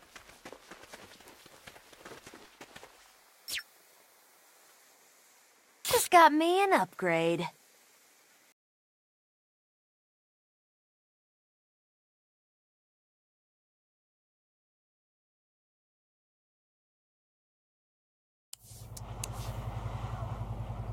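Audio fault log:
0.22–20.61 s, clock drift buffer slips: a regular click every 0.6 s, about forty in all, each a jump of a few samples. The likely cause is two devices on separate clocks, drifting by roughly 300 ppm, so the buffer periodically drops or repeats samples.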